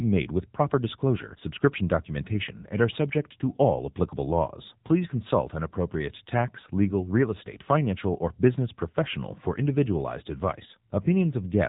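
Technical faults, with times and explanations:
Throughout, AMR narrowband mobile codec: the speech is squeezed into the telephone band, with nothing above about 3.8 kHz, so sibilants lose their hiss and the sound turns boxy. The codec rebuilds each short frame from a vocal-tract filter excited by a handful of pulses, and with so few bits per frame the voicing comes out plainly buzzy and synthetic, a level of damage that fits the 7.95 kbps mode of AMR-NB.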